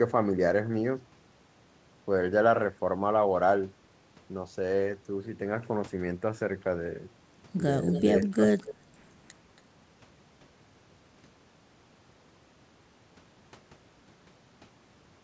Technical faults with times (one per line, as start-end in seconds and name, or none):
7.91-8.02 echo leak
8.24-8.43 speech suppressed in double talk
8.62-8.98 echo leak
9.57-9.61 echo leak